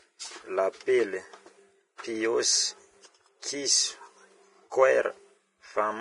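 Speech, degraded throughout by what is likely heavy Vorbis compression: the treble cut-off is lowered, the upper band is hissy and grainy where fine detail was quantised into noise, and consonant onsets sound blurred, consistent with a low bitrate near 30 kbps.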